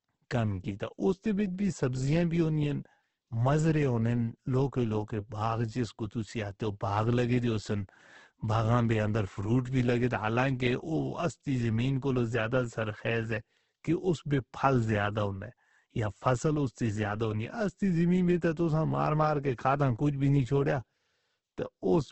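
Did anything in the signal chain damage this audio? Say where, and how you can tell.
Yes, Opus compression damages the speech throughout the clip, at the codec stage. Nothing reaches above about 8.1 kHz, a wideband cut, and the speech sounds rough and grainy, with noisy fill where detail should be. That is likely Opus in its CELT music mode, which pointed to a very low bitrate of around 12 kbps. Starved of bits, it keeps each band's energy but fills the bands with folded or noise content instead of the true detail.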